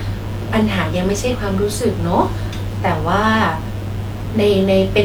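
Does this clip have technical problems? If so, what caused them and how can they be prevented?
Yes. Mains buzz runs throughout this speech, about 25 dB below it. Switching spikes from 60 Hz power add raspy harmonics. Use shielded cables and avoid dimmer circuits.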